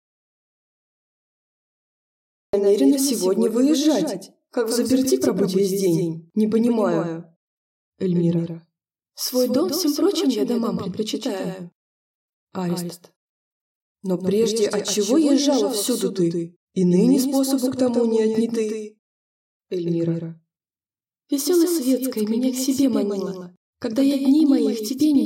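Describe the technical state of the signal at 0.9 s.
At 0.9 s you're inside an audio dropout to silence that's already running when the clip starts and lasts until 2.53 s: dead silence, no room tone, likely from lost input while recording carried on. The doubled audio track runs through the whole clip, a full-band copy about 5 dB down trailing roughly 150 ms behind, most likely from a second, slower capture path. It's inaudible at this point since both copies are silent.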